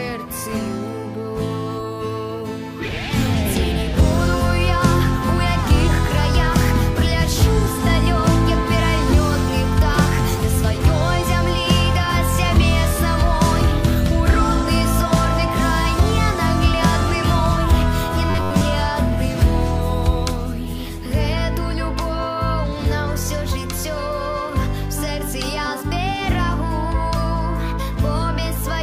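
From 18.30 to 18.61 s the sound becomes a rigid metallic buzz at 93.8 Hz: robotic sound from repeated short buffers, likely a slice of about 11 ms looped over most of the stretch while fresh audio is skipped. Unlike a dropout, nothing falls silent.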